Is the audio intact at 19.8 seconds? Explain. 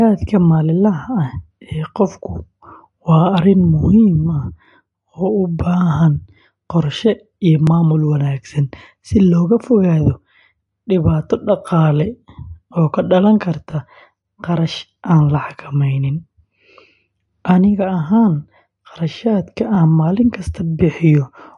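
No. From 19.75 to 19.77 s there is an overlapping chunks fault: a new chunk began before the previous one finished, so about 20 ms of audio plays twice at the join. This is heard as a brief stutter or click. The join falls where processing in 3-second chunks would place it. Unlike a dropout, nothing is missing at this point; a short piece is doubled instead.

The same moment also carries plainly audible MP3 compression artefacts, a watery, swirly texture, and there is no content above 11.3 kHz. The likely cause is a low-bitrate MP3 encoding, with the sound pointing to something near 49 kbps. The encoder discarded weak frequency lines frame by frame and cut the treble at a fixed point. A simple low-pass filter would only dull the sound, without the shifting, metallic artefacts heard here.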